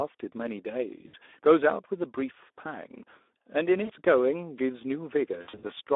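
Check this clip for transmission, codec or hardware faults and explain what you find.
Two faults are audible, one running through the whole clip and one hitting at three spots.

The Speex codec is on the entire clip, with the line limited to roughly 300 Hz to 3.6 kHz. The speech comes out hoarse and grainy, with a noisy edge. That's a CELP coder starved of bits for the excitation, and it fits a low setting around 11 kbps.

VoIP packet loss concealed by the speech codec shows up at 1.07–1.15 s and 3.83–3.92 s, each a gap of about 60 ms, then again over 5.42–5.73 s as scattered short losses. In each gap the decoder carries its last pitch and filter forward with falling gain, so you hear a brief buzzy or noisy, fading smear instead of real speech.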